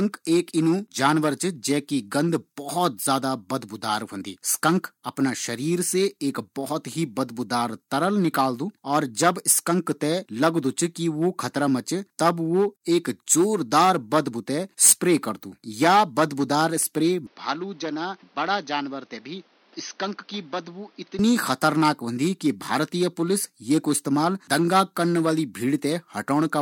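From 17.27 to 21.19 s the speech turns dull and boxy and drops about 10 dB, with a new noise floor roughly 30 dB down. This is likely an input switched to a poorer device. On a spectrogram nothing appears above 6.2 kHz for that stretch. The waveform shrinks, with no gap at either switch.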